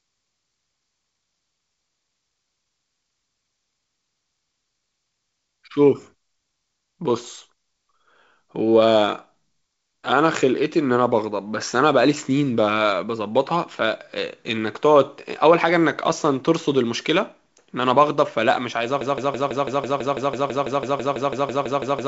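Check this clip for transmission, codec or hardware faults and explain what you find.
One fault is audible. From 19.01 s to the end, a broken-record loop repeats a 165 ms fragment 19 times. A stalled stream likely kept resending its last buffer, so the intervening audio is lost. The band-limited sound, with nothing above 7.7 kHz, fits G.722 wideband coding at around 56 kbit/s.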